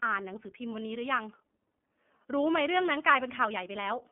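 Throughout, the speech carries iLBC codec damage. Nothing passes above 3.6 kHz. Independently coded 30 ms frames, fitting 13.33 kbps, leave it plainly rough and synthetic.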